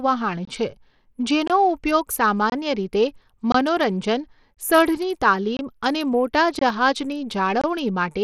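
Bluetooth SBC compression runs through the whole speech clip, likely the cause of its thin, gritty sound. The top sub-bands get too few bits, so the treble flickers or drops out and rough quantisation noise and aliasing sit on the sound, which fits a low bitrate near 80 kbps.

A gap between chunks occurs at 0.45, 1.48, 2.50, 3.52, 4.54, 5.57, 6.59 and 7.61 s. Each is about 23 ms of silence, repeating every 1.0 s. Nothing is lost, but each join between chunks is held apart by a short hole.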